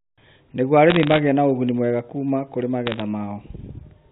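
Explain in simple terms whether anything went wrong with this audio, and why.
Something went wrong twice: bit errors on a digital phone line. The speech travelled as a standard telephone signal, and in two short stretches a small share of its digital bits arrived flipped. Each flipped bit corrupts one tiny slice of the sound, so instead of smooth speech you hear sharp ticks and a brief crackle laid over the talking. This happens from 0.90 to 1.19 s and again from 2.87 to 3.02 s, with the second burst slightly denser.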